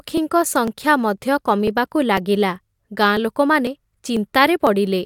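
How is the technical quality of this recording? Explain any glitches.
The recording has one defect: periodic USB or driver dropouts. From 0.18 s to 4.67 s, about a millisecond of audio is skipped every 0.5 s, roughly ten times. Something is stalling the audio path at a fixed interval, and each gap produces a regular tick within the speech.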